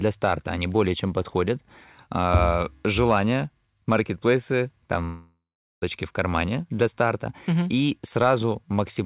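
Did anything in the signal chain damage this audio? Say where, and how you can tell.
Yes, a long network dropout runs from 5.04 to 5.84 s, most likely lost at the network stage of the call path. About 0.78 s of audio never arrives. The receiver fills the gap by stretching the last sound into a fading buzz, and the final 0.41 s or so of the gap is near-silence. Audio resumes at 5.84 s with the missing stretch simply gone. Across the clip nothing is heard above 4 kHz, which fits a G.711 mu-law call codec.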